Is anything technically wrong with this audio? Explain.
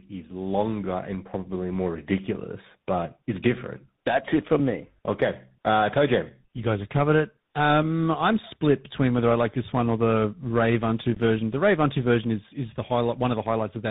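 Yes, tandem speech coding runs throughout: the speech sounds rough, muffled and warbly, consistent with GSM full-rate coding followed by CVSD, the second re-encoding the first's degraded output. A spectrogram shows nothing above 3.8 kHz and smeared, unsteady harmonics.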